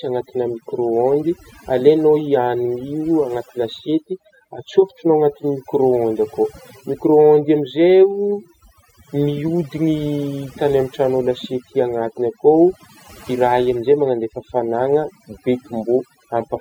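Overdone noise removal runs through the whole recording: an over-aggressive noise reducer pulls individual frequency bands down whenever they sit near its noise estimate, so the background drops and breaks up into twinkling specks. A spectrogram shows scattered isolated blobs between phrases.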